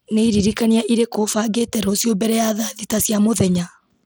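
Across the whole speech clip, plainly audible codec damage points to likely Bluetooth SBC compression at a low bitrate, perhaps near 96 kbps. Coarse sub-band quantisation adds a gritty edge. A spectrogram shows a hard ceiling at 19.6 kHz, with blocky, smeared upper bands.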